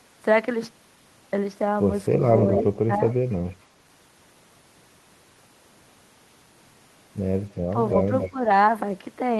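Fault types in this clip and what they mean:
Echo leak: A delayed copy of the speech comes back about 280 ms after the original, in three short scraps near 2.6 s, 3.3 to 3.5 s and 8.2 s. The first is strong, the second barely audible and the third moderate. This is likely a far-end loudspeaker whose echo canceller let some of its microphone pickup through. On a spectrogram it appears as a weaker repeat of the speech harmonics, offset in time.
Speech suppressed in double talk: The speech briefly dips by around 10 to 15 dB at about 2.9 s, 7.7 s, 8.1 s and 8.3 s. Each dip lasts about a tenth of a second or less. The likely cause is an echo canceller that could not separate the talker from the returning echo while both were active, so it turned both down. On a waveform the envelope shows short notches, and on a spectrogram the energy thins.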